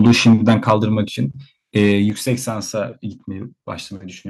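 From 0.0 to 0.74 s the microphone input was likely set too high, driving peaks about 6 dB past the converter's limit. Roughly one sample in twenty is flattened, giving the loudest syllables a harsh, crackly edge. The call software likely reacted by stepping the microphone volume down, at 0.07 s by about 2 dB, then at 1.08 s by about 6 dB, each an abrupt drop in speech and background level. The input likely overloaded again from 1.76 to 1.92 s, about 2 dB over, clipping a smaller share of samples with a briefer crackle. At 2.1 s the volume was likely cut once more by about 6 dB, with another sudden fall in level.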